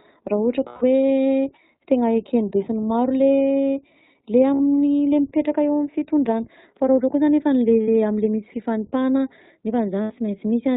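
Speech coded throughout with the iLBC codec, and the coding damage is plainly audible: the voice has a rough, slightly synthetic edge. On a spectrogram, everything above 4 kHz is empty because the codec is narrowband. The graininess fits 20 ms frames at roughly the 15.2 kbps mode, with each frame's excitation coded on its own. Lost iLBC frames interrupt it four times: 0.68–0.84 s (140 ms), 4.54–4.61 s (60 ms), 7.82–7.89 s (60 ms) and 10.02–10.12 s (80 ms). In each gap the decoder conceals the missing packets by repeating the last pitch cycle mixed with noise. This produces a held, faintly buzzy vowel. On a spectrogram these spans show flat, smeared harmonic bands. The waveform shows a repeating pitch cycle mixed with noise. Because the frames stand alone, normal sound returns immediately after each gap.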